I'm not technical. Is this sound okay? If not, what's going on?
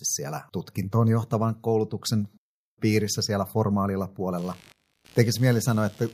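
No, not quite. From about 4.37 s to the end, a quiet buzzy, scratchy noise sits underneath the speech, pulsing roughly seventy times a second. That's computer activity noise: when the computer's processor, graphics card or mouse suddenly works harder, the shifting power draw disturbs the electrical ground the audio gear shares, and that leaks in as buzz. It follows the computer's workload, not the speech itself.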